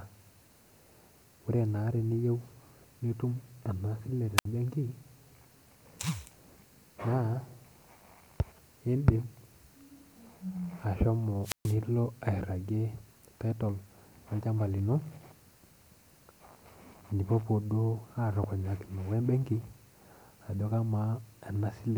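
A speech recording interrupted twice by wireless microphone squelch dropout, at 4.37 to 4.45 s and again at 11.42 to 11.76 s. Each time the radio link from an analogue FM microphone weakens. Hiss briefly swells, then the receiver's squelch cuts the output. The holes last about 65 ms and 133 ms, and the speech returns afterward. On a waveform each shows as a flat gap. A spectrogram shows a thin band of broadband noise before a blank vertical strip.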